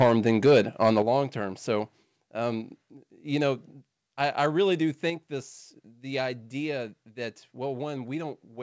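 From the start to 1.0 s, the loudest peaks are flattened against the converter's limit, which sounds like a harsh, crackly edge on the strongest syllables. This is microphone overload, likely from input gain set about 7 dB too hot, so the tops of the waveform are sliced off. On a waveform the peaks show as flat plateaus, a few percent of all samples. A spectrogram shows broadband vertical smears of distortion reaching up to the 8 kHz ceiling. That ceiling is where the wideband call codec stops all content.

At 1.02 s, just before "long term", the level drops abruptly by about 7 dB. This microphone volume step down likely comes from the call software cutting the device's input gain after the clipping, in one move rather than a gradual fade. The voice and the background fall together. A second step of about 4 dB comes at 5.1 s, between "I I really do" and "this the idea that". On a waveform each step is a sudden shrink in the envelope. 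A spectrogram shows a uniform darkening across all frequencies at that instant.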